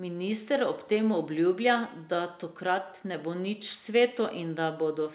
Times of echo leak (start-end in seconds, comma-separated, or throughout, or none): none